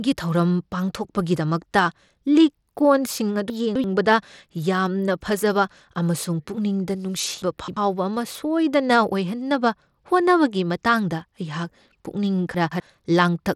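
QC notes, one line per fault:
throughout: Bluetooth SBC compression. The top end flickers in and out and a gritty, grainy noise with aliasing rides on the speech, with nothing above 17.3 kHz. The likely cause is a small bit pool, which starves the upper sub-bands and coarsely quantises the rest; the damage is plainly audible and fits a low rate of about 96 kbps. The unmasked grit is what sets this apart from the smeared, swirly artefacts of perceptual codecs like AAC or MP3.
3.50–3.84 s, 7.42–7.77 s (just after "ꯌꯥꯝꯅ ꯐꯖꯕ ꯑꯃꯁꯨꯡ ꯄꯨꯛꯅꯤꯡꯗ"), 12.54–12.80 s: chunks out of order. In each span, one block of about 85 ms plays late, three blocks late in the first two and two blocks late in the last. The speech jumbles briefly, with three hard joins. Nothing goes missing and nothing repeats, which separates this from a dropout or a stutter.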